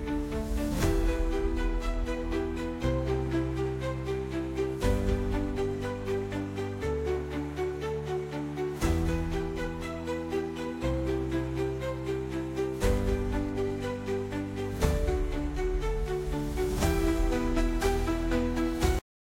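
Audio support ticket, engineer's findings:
Cut-off end at 18.99 s: sound stops mid-event, straight to digital silence, no decay, for the last 0.39 s. Final buffers never written to output or played back.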